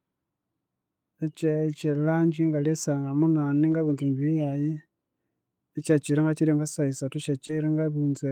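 At 3.71–3.73 s, a lost packet rebuilt from error correction: a lost 20 ms stretch was replayed from the low-bitrate copy carried in the next packet, so there is no gap, but it sounds briefly rougher and noisier. At 7.47–7.51 s comes short concealed packet loss: 20 ms went missing and 14 ms was filled by extending the preceding sound, heard as a brief smear or wobble before the signal resumes. From 7.49 s, overlapping it, another 20 ms was rebuilt from error correction, consistent with one more dropped packet.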